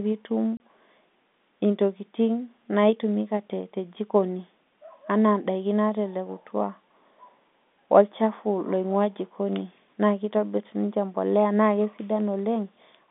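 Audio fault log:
0.57 to 0.60 s, packet loss filled with silence: a hard 30 ms hole, which points to one dropped packet replaced with silence over the G.711 telephone line.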